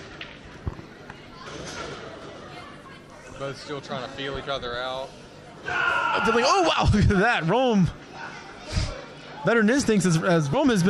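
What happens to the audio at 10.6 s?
Just before that point, between 10.53 and 10.56 s, compressed frames are skipped. A few frames never reach the output, which fits 10 ms frames, so the audio jumps ahead by around 40 ms.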